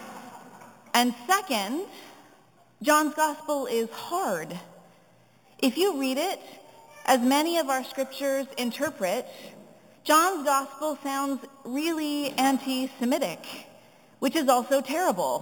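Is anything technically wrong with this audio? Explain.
Yes. Throughout, a bright metallic fizz shadows the sound, swelling with its level about 13 dB below it and filling 4 to 8 kHz. This is imaging from sample-and-hold upsampling: samples were repeated without smoothing, which fits an original 8 kHz rate, so mirrored spectral copies appear.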